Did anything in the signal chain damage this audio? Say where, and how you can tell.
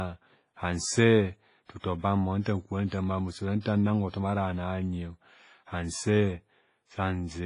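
Yes. The damage happened at the codec stage: the speech was likely encoded with WMA compression at a low bitrate, which fits something around 24 kbps. Nothing is left above 10.4 kHz, so the top of the band is cut off cleanly. Throughout the clip the speech sounds heavily processed. Quiet spectral detail has been discarded and replaced by a ringing, washy texture with a hiss that swells and fades along with the level.

The same transform codec also causes pre-echo at 1.79 s, 2.42 s, 2.87 s and 3.60 s. Each time, a short hiss appears just before a sharp onset and lasts about 41 to 52 ms. The encoder sizes its quantisation noise for the loudest part of each block and spreads it across the whole block. That pushes noise into the near-silence ahead of each attack, so the attacks sound smeared rather than crisp.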